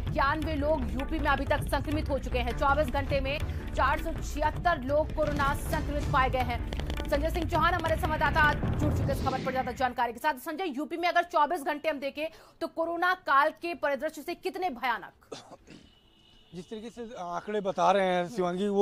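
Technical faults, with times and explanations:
3.38 s and 7.71 s, dropped buffer (overrun). At each point a short piece of audio vanishes and the sound jumps straight ahead, with no gap of silence. About 40 ms goes missing at 3.38 s, and about 10 ms at 7.71 s. The abrupt join makes an audible skip. The likely cause is the recording software failing to read its buffer before the hardware overwrote it. The second skip falls inside the run of clicks.
6.73 to 8.54 s, train of clicks. A series of similar sharp ticks rides over the sound for almost two seconds. There are roughly fifteen of them, at about 8.8 per second. Their spacing is uneven, so they sound like a ragged patter, not a steady beat. They stand out at roughly 10 dB above the sound. The likely cause is electrical interference or a faulty connection or power supply injecting pulses into the signal.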